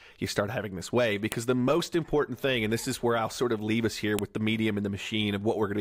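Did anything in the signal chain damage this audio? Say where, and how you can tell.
Yes. The damage happened at the storage stage, where separate pieces were joined with a file header played as audio. Two sharp, loud snaps land at 1.32 s, between "start having this way" and "the most important thing", and at 4.19 s, between "of leave us here" and "with the medium". Each is a burst of header bytes read as samples. Unlike a dropout click, nothing is missing around it, and its level ignores the speech beneath.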